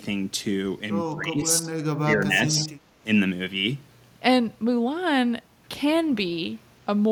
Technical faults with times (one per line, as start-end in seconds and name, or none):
1.13-2.71 speech suppressed in double talk